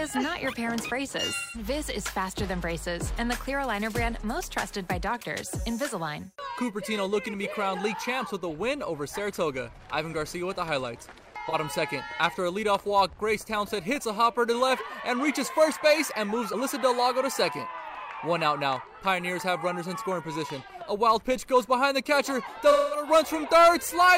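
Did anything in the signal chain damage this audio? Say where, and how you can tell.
Yes, at the codec stage: AAC frame loss with concealment at 1.35–1.65 s, 11.48–11.55 s and 22.71–23.07 s. Each patch turns smeared and noisy as the decoder rebuilds missing frames from the last good spectrum. The longer losses, near 0.17 s and 0.21 s, sag toward silence before recovering.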